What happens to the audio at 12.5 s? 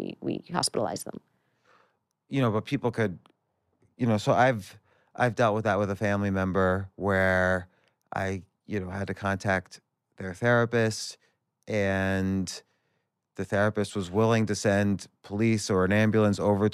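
At 12.5 s the speech carries on cleanly, with no dropout, click, distortion or other fault audible at that point.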